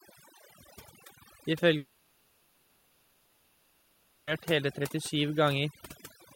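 From the start, overdone noise removal gates individual frequency bands too hard, leaving a lowered background that breaks up into twinkling specks. From 1.77 to 4.29 s, about 2.5 s of audio is gone, replaced by a sustained concealment fill. This is likely a long network dropout, after which the speech resumes without the lost section.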